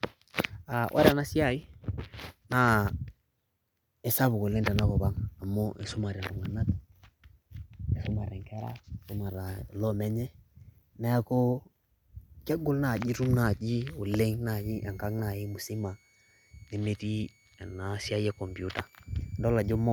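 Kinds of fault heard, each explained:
Switching supply whistle: a switching power supply drops into a burst mode slow enough to land in the audible band, so a faint high tone rides under the speech, roughly 35 dB below it, from 14.49 s to the end at 19.92 s. The whistle wanders between about 2.15 and 2.36 kHz as the load shifts. On a spectrogram it shows as a thin, slightly wavering horizontal line near 2 kHz, too weak to change the waveform visibly.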